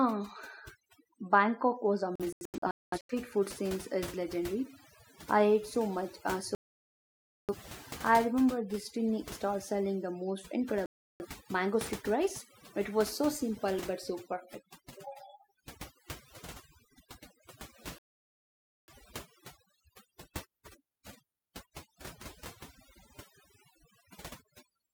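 The whole clip has overdone noise removal: the denoiser was set too hard and gated bands near its noise estimate, leaving a dead background with twinkly specks.

Then come digital broadcast dropouts, where the receiver lost the signal and muted. At 2.16–3.14 s it's scattered short holes, the longest about 0.21 s. After that there are gaps at 6.55–7.55 s, 10.86–11.26 s and 17.98–18.93 s.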